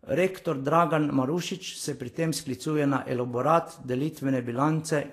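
Throughout, the speech is hissy and grainy with a dulled top, likely Vorbis compression at around 34 kbps turning coarsely quantised treble into noise.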